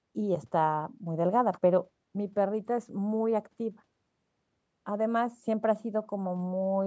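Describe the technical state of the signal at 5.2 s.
At 5.2 s the speech is intact, with no fault, and the only processing audible is the normal call microphone chain, whose band stops at 8 kHz.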